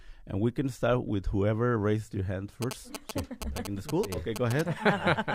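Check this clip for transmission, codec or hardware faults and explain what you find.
There's one fault here, and it's a hardware one: GSM signalling bursts from a nearby 2G phone, running from 2.62 s to 4.61 s. The phone is only signalling, so it fires short clusters of radio bursts instead of a steady stream, and some stage in the audio circuit rectifies that RF into audible pulses. You hear it as a galloping dit-dit-dit of short buzzes at about 217 Hz, sitting only a few dB under the sound itself.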